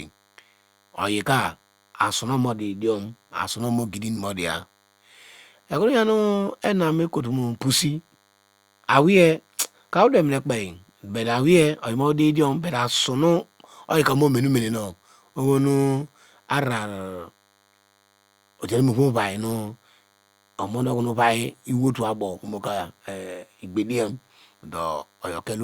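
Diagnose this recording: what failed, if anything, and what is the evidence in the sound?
The analogue stage failed. A DECT cordless phone buzz sits under the speech for the whole recording. It is a steady, thin buzz at 100 Hz, rich in harmonics, about 40 dB below the speech. A nearby DECT handset or base transmits a short radio burst every 10 ms. Some part of the analogue audio circuit rectifies that radio energy. Each burst becomes a click, and 100 clicks per second make this harmonic-heavy buzz.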